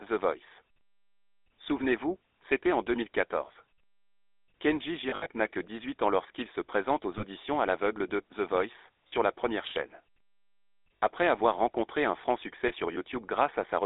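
The whole clip carries the sound of the GSM full-rate codec. The speech is squeezed into a telephone band of about 300 Hz to 3.7 kHz. Nothing above that survives. The codec rebuilds the voice from a vocal-tract model driven by coarse, regular pulses, which fits a rate of about 13 kbps. The damage is plainly audible. The voice has a buzzy, gravelly edge throughout.

Lost GSM frames break in five times. At 5.1 to 5.27 s, about 100 ms is missing, scattered over 160 ms, with the longest gap around 70 ms. There the sound freezes into a rough, metallic ring. Shorter holds follow at 7.18 s (20 ms) and at 9.08 s (40 ms), just before "la première chaîne". Another comes at 10.99 s (60 ms), before "avoir rencontré un franc". The last is at 12.68 s (20 ms), right after "rencontré un franc succès". Each time, the decoder repeats the last good frame, and the sound briefly turns metallic and stuck.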